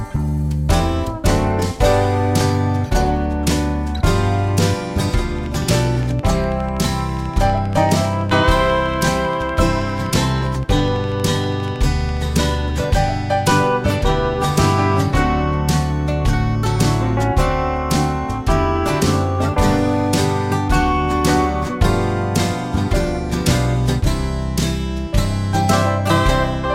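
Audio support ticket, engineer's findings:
Train of clicks, 5.39 to 12.26 s. Regular ticking at 12.4 per second, around a hundred near-identical pulses, peaking near programme level and audible through pauses. Likely external interference or a faulty connection or power supply injecting periodic impulses into the signal path.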